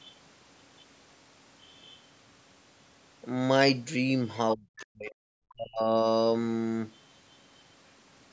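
From 4.55 to 5.24 s, the speech is suppressed in double talk. The talker's level falls sharply, at its deepest by about 40 dB. The dips come and go across roughly 0.7 s, so the voice thins and breaks up. The likely cause is an echo canceller that heard both sides at once. It could not tell the talker from the loudspeaker echo, so it turned everything down.

At 4.79 to 4.85 s, the other side's voice leaks through. A brief, faint scrap of a second voice sits roughly 25 dB below the speech. The likely cause is loudspeaker playback that the echo canceller did not fully remove from the microphone.

From 5.49 to 5.95 s, the speech is suppressed in double talk again. The level drops by up to about 40 dB over roughly half a second. Parts of the voice dip and cut out in pieces. This again likely comes from the canceller muting both sides during overlap. The call microphone processing, whose band stops at 8 kHz, is not a fault.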